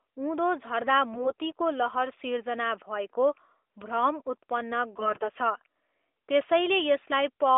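From 4.94 to 5.28 s, AMR bit errors at several percent scramble the codec's excitation pulses, so the speech turns scratchy and gargly while pitch and loudness hold, with no dropout gap.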